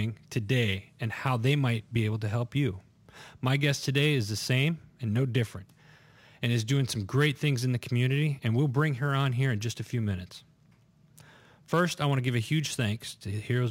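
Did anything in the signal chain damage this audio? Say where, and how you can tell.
Yes. Throughout the speech there is a fine hiss and grainy roughness riding on the signal. It swells on loud passages and bright, sibilant sounds and disappears in the pauses, so it follows the waveform rather than sitting underneath it. This is sample clock jitter at the converter. The sampling clock wanders by something like a few microseconds, so each sample lands slightly off time. Steep, fast-moving parts of the waveform turn that timing error into an amplitude error roughly 30 dB below the speech.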